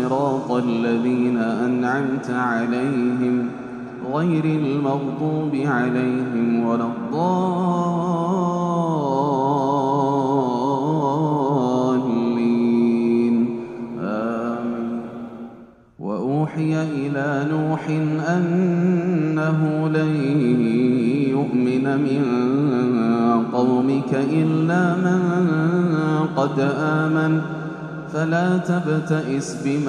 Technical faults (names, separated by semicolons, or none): none